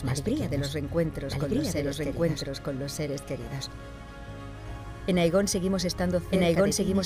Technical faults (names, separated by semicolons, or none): doubled audio track